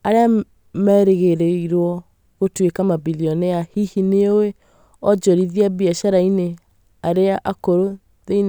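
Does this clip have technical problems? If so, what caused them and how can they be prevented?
No technical faults are audible.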